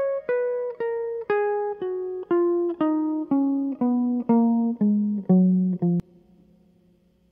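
A music clip with damaged data in a compressed stream at 6.00 to 6.03 s: a brief disturbance of about 30 ms where the decoder misreads corrupted frames and resynchronises.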